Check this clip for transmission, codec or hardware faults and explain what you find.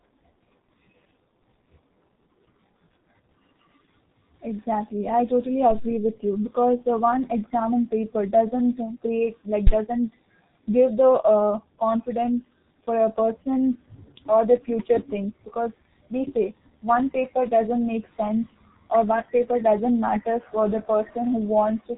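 The whole clip carries G.723.1 codec damage, and it is heavy. This low-rate telephony coder models speech in 30 ms frames and refreshes its vocal-tract estimate slowly, so consonants smear and voicing turns hoarse and muffled, which fits a rate near 6 kbit/s. Nothing passes above 3.9 kHz. On a spectrogram, energy stops at a flat ceiling near 3.9 kHz, and formant tracks look blocky and stepped rather than smoothly gliding.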